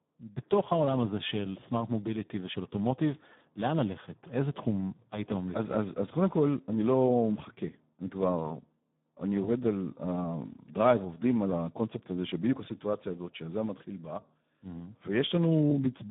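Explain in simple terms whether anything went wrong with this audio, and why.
Something did go wrong, and it lasts the whole clip: the speech has been squeezed through the Speex codec, an older speech compressor used in internet calls and game chat, at a low-quality setting. With too little data to rebuild the voice accurately, the speech comes out noisy and hoarse, with a robotic edge. The sound is also confined to a narrow telephone-like band of roughly 150 Hz to 3.6 kHz, with nothing above 3.8 kHz, so it sounds muffled and thin.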